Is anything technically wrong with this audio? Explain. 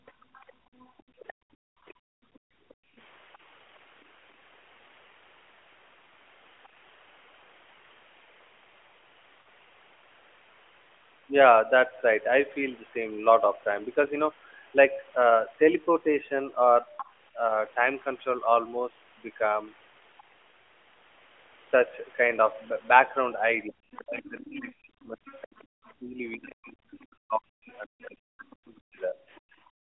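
Yes. The recording is speech over an AMR narrowband mobile link, band-limited to roughly 300 Hz to 3.4 kHz, and it carries four kinds of fault.

Other side's voice leaking through, from 0.00 to 3.38 s, at 6.64 to 6.68 s, at 16.97 to 17.12 s and from 23.91 to 28.79 s. A faint second voice sits under the main talker. It is very quiet at the start and around 6.6 s, roughly 30 and 35 dB down respectively. Near 17 s it is much more audible, and through the final stretch it is moderately quiet. The likely cause is that the far end's loudspeaker output reached the microphone and the echo canceller did not fully remove it. On a spectrogram this shows as a weaker, separate set of harmonics with its own pitch track running alongside the main voice.

Background gated by the echo canceller, from 0.19 to 2.95 s and from 29.44 s to the end. The room tone drops out intermittently, for about one and a half seconds in total in the first span and about half a second in the second. 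The deepest drop is about 39 dB. The canceller clamped the microphone gain while it detected loudspeaker activity, then released it. In the waveform the noise floor suddenly collapses to near-silence and then steps back up. On a spectrogram these appear as dark vertical gaps in the background noise.

Lost AMR speech frames, at 2.30 s and from 9.42 to 9.44 s. The first is a 20 ms gap and the second lasts 40 ms, which fits two consecutive lost frames. Corrupted frames forced the decoder to repeat its last good parameters at reduced gain, so the first event is heard as a brief dip or warble and the second as a drawn-out, fading sound. The waveform shows a short notch where the envelope sags. On a spectrogram the harmonics smear into a slightly frozen, fading patch.

Speech suppressed in double talk, from 23.65 to 29.16 s. While the leaking second voice is present, the main talker repeatedly dips, thins or cuts out, for about four seconds altogether. 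The deepest drops are around 40 dB. This is likely the echo canceller failing to separate near-end speech from echo and attenuating everything. The waveform shows the main speech envelope chopped into uneven fragments. On the spectrogram, the upper harmonics vanish or whole syllables go dark.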